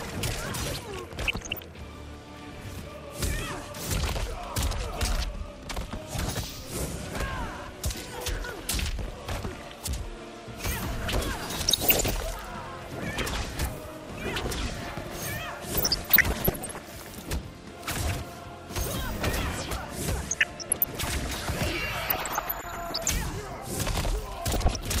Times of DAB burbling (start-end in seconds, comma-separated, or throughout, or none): 1.19-1.61, 11.67-12.10, 15.77-16.78, 20.31-21.03, 22.09-23.10, 24.53-24.77